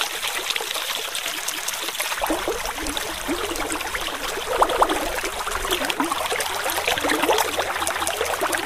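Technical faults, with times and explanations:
1.51 s, 4.71 s and 7.91 s, overlapping chunks: at each join the final 200 ms of one 3-second chunk replays at the start of the next, so the sound stutters back on itself. Nothing is lost and no silence appears, unlike a dropout, and the joins recur at a steady 3.2-second spacing.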